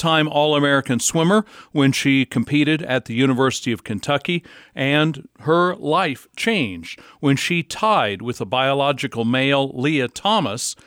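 Nothing stood out as a technical fault on listening to this speech recording.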